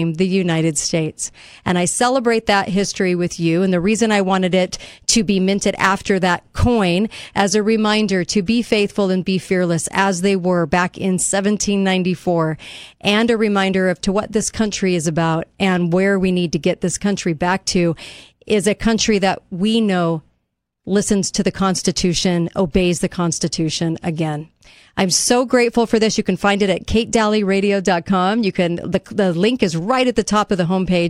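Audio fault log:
No fault can be heard anywhere in this speech recording. There is nothing to log for it.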